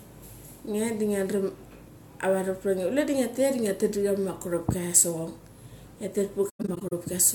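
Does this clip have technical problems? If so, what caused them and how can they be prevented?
Yes. Between 6.49 and 6.93 s the speech drops out in several soft-edged gaps rather than one clean break, with about 235 ms missing across roughly 430 ms and the longest silence around a tenth of a second. This is AAC frame loss with muting: the decoder zeroed the spectrum of missing frames, and the overlapping transform windows faded the sound down and back up around each hole. Reliable transport with retransmission or forward error correction would prevent it.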